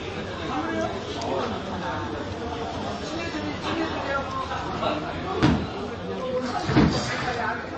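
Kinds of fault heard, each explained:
MP3 compression: the sound has a hard ceiling near 8.3 kHz with nothing above it, and plainly audible watery, swirling texture as weak frequency components drop in and out between frames, with smeared attacks; a low bitrate around 31 kbps is the likely cause.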